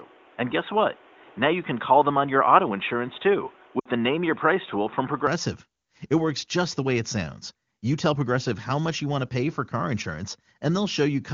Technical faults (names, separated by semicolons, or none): input switched to a poorer device; lost AMR speech frames